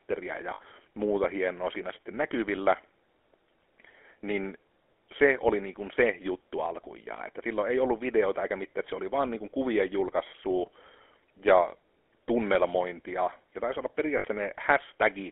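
GSM full-rate codec damage runs through the whole speech clip. The codec rebuilds the voice from a vocal-tract model excited by sparse regular pulses, which leaves a plainly audible buzzy, gravelly roughness. The sound is confined to a narrow telephone band of roughly 300 Hz to 3.4 kHz, and the character fits a 13 kbps stream.

Lost GSM frames occur from 0.54 to 0.61 s, just before "muuta hienoa siinä sitten", and again from 14.18 to 14.25 s, right after "tunnelmointia ja taisi olla". Each gap lasts about 60 ms, which fits three dropped 20 ms frames. The decoder repeats the last good frame, producing a brief, rough metallic ring.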